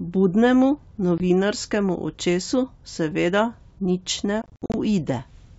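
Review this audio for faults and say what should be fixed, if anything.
Packet loss on an ADPCM call: a 20 ms hole at 1.18 s, then scattered gaps from 4.42 to 4.75 s. The G.722 decoder's predictor loses sync, so speech restarts slightly distorted. Add packet loss concealment with predictor and step-size resynchronisation, or forward error correction.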